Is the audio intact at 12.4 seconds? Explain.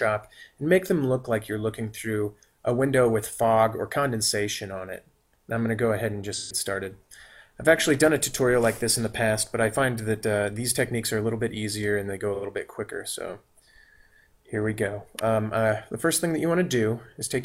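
No. From 12.34 to 12.44 s the stream suffers AAC frame loss with concealment: about 85 ms of coded audio never reaches the decoder, which fits two lost frames. The decoder patches the gap by rebuilding from the last good spectrum, randomising signs or interpolating energy across the hole. Because the gap is brief, the sound doesn't fade to silence; instead that stretch turns smeared, noisy or phasey before clean decoding resumes.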